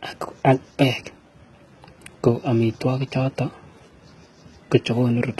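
Throughout the speech, the encoder was likely starved at HE-AAC compression settings pointing to roughly 16 kbps, so it kept only the lower spectrum and rebuilt the treble from copied bands. The s sounds turn gritty and lispy, and the bright top sounds synthetic and heavily damaged.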